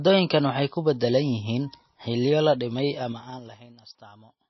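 From the start, the speech sounds thin and watery. Nothing is heard above 5.8 kHz. The treble stops at a hard edge. Quiet detail seems to flicker in and out, and s sounds turn swirly. This is likely MP3 compression at a very low bitrate, around 24 kbps. The encoder runs short of bits. It drops the top band and zeroes weak frequency lines from frame to frame. The damage is plainly audible.

Right after "yihiin xilliyo la dhimay", from 2.99 s to 3.67 s, the level falls by about 25 dB. It drops in 3 dB jumps, around ten a second, with no smoothing between them. Each jump leaves a small click. Together they form a ticking, zipping texture over the fading sound. This is zipper noise.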